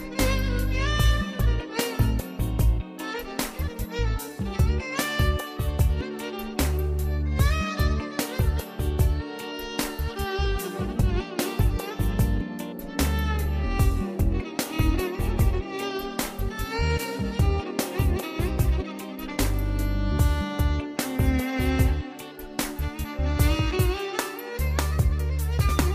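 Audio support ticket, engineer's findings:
No fault reproduced on listening; no dropout, glitch, distortion or timing issue to attribute to any component, ticket can close as no-fault-found.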